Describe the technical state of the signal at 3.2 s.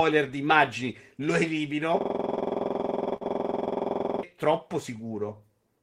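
At 3.2 s the signal is stuck in a system hang loop running from 2.01 to 4.23 s. The machine froze while the sound hardware kept replaying one 46.44 ms chunk, which fits a 2048-sample buffer, about 47 times over, so you hear a rattly machine-gun stutter at roughly 21.5 Hz instead of speech.

On top of that, there's a short stall from a late packet between 3.16 and 3.24 s. A packet didn't show up in time, the jitter buffer ran dry, and the receiver stretched the last sound for 44 ms before carrying on. Nothing's lost, but everything after lands 44 ms later, with a sound held too long.

Underneath it all is clock drift between sender and receiver, running the whole clip. The sender's clock runs roughly one and a half percent slow, so the jitter buffer keeps draining and the receiver patches things with small repeats, leaving little timing hiccups at uneven intervals, including around this moment.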